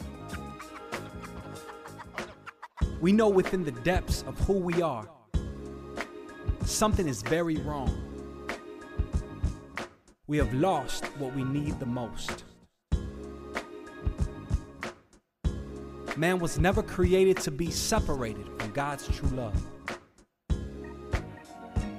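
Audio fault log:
Nothing to log here; I listened all the way through and didn't catch anything that stood out as a problem.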